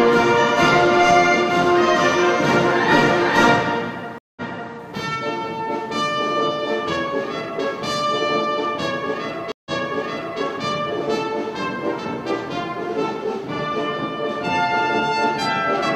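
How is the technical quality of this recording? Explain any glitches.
Two glitches break the recording, each a short dropout followed by a small backward jump. At 4.18 to 4.74 s the sound cuts out for about 181 ms, then resumes 372 ms earlier, so a moment repeats. At 9.52 to 10.40 s a 138 ms silence is followed by a 743 ms repeat. Both are stream reconnects: the connection dropped, the player rejoined and started a fresh decoder, and the server resent a burst of already-played audio.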